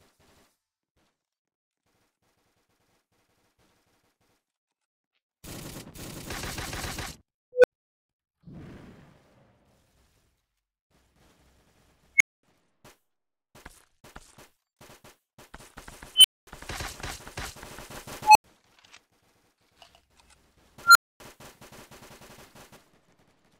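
An unstable filter strikes at 7.53, 12.16, 16.15, 18.23 and 20.83 s. A runaway recursive filter swells a squeal, pitched roughly 500 Hz to 3 kHz, into clipping within 0.04 to 0.12 s. Overflow then silences it for 0.08 to 0.25 s. A spectrogram shows a brightening horizontal line ending in a blank gap. The waveform shows a growing envelope flattening as it clips, then silence.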